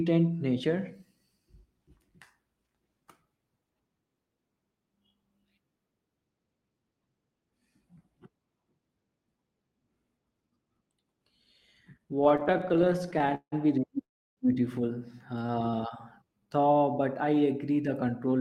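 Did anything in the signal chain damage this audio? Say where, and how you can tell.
Yes. The network stage and the receiver's jitter buffer damaged this speech in three ways.

Repeated stalls (stutter) run from 12.21 to 13.54 s, just before "be really beautiful": 29 gaps, the longest 171 ms, with about a third of that span filled by continued sound. A shorter run from 15.39 to 15.84 s has 8 brief gaps of up to 17 ms. Packets arrived too slowly, and the buffer repeatedly emptied.

A call audio freeze follows "be really" at 14.04 s and lasts 0.35 s. It is about 330 ms of silence, and the audio then resumes where it stopped, so nothing is lost but delay is added. The likely cause is packets held up in transit until the buffer ran dry.

A jitter buffer slow-down spans 16.25 to 17.42 s, ending just before "the control". The audio plays at about 89% speed with unchanged pitch and stretched sounds, adding 131 ms. 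The receiver repeated pitch periods to rebuild its reserve.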